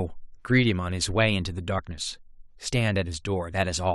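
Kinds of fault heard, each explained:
Damaged data in a compressed stream: A short stretch of the encoded speech arrives corrupted, so the decoder misreads those frames and must resynchronise on a later frame header. This leaves a brief disruption in the speech from about 1.78 to 1.80 s.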